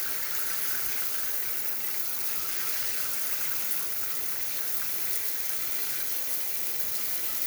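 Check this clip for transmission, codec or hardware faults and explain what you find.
Nothing here points to a transmission, codec or hardware problem; the sound just runs along untroubled the whole way, with nothing to flag.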